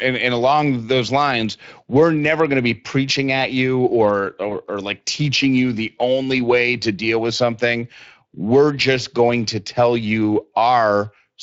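The whole clip carries Speex codec damage, plainly audible as a hoarse, noisy edge on the speech, which fits a Speex setting around 20 kbps. Between 4.49 and 4.53 s, right after "preaching at you or", there's a VoIP packet loss concealed by the speech codec: about 20 ms of audio went missing, and the decoder's stretched guess briefly smears things before "or like teaching you".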